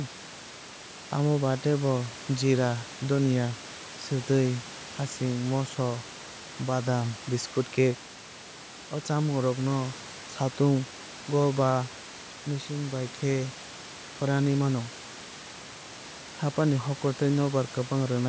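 Nothing is technically wrong with this clip of speech; no faults can be heard at any time.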